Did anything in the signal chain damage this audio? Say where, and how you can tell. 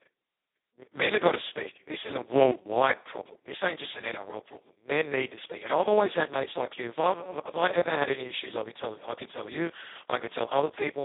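Yes. Throughout, the speech sounds hoarse, buzzy and close to robotic, confined to a narrow 300 Hz to 3.6 kHz band with nothing above 3.8 kHz. That is Speex codec damage at the codec stage: the starved excitation points to a very low setting near 2 kbps.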